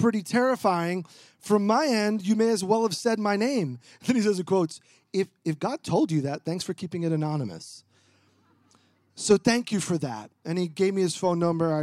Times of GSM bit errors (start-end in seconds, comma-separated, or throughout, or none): none